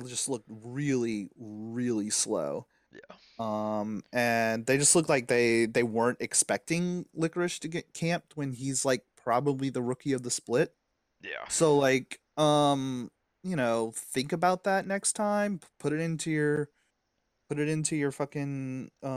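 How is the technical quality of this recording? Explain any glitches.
There are no glitches in the technical quality of this recording.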